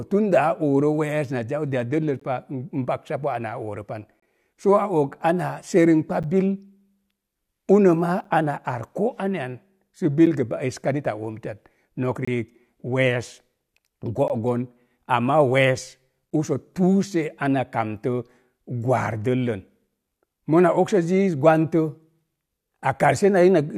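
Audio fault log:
2.20, 4.20–4.22, 6.23, 8.24, 10.26, 12.25–12.28, 14.28, 16.30 s: gap between stream segments. Hard-edged dropouts of 8 to 26 ms recur about every 2 s, where segment timestamps don't quite meet and silence fills the hole. No audio is lost.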